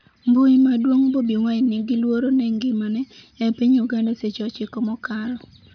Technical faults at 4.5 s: none

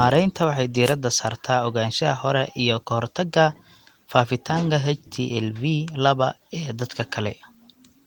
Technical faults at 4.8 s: none

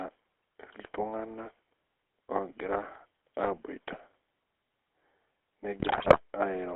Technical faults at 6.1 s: GSM full-rate codec; GSM bit errors

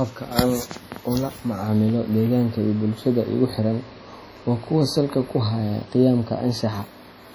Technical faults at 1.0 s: WMA compression

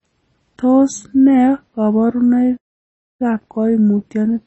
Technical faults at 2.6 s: MP3 compression; playback stall

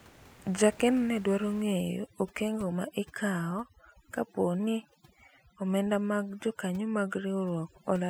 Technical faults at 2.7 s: overdone noise removal

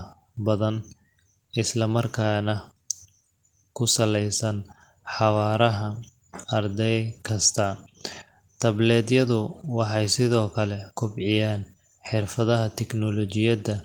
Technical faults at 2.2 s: none

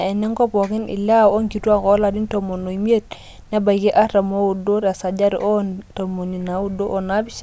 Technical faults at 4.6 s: none

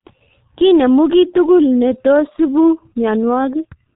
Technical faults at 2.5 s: G.723.1 codec

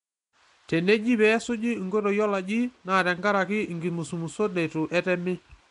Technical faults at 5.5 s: Nellymoser compression

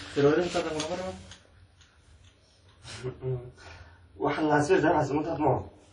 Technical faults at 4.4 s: WMA compression

